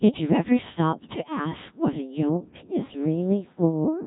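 From the start the speech sounds robotic, buzzy and heavily mangled, with nothing above 3.8 kHz. This is the Codec 2 vocoder. It sends only pitch, voicing, energy and a coarse spectral envelope, then rebuilds the voice from sine waves. The damage fits a very low-rate mode near 1.3 kbit/s.

From 2.29 s to the end the sound turns duller and more muffled. This is de-emphasis applied wrongly: a treble-cut filter was applied to audio that had no matching boost, or was applied twice, tilting the response down by about 11 dB at 10 kHz relative to 1 kHz.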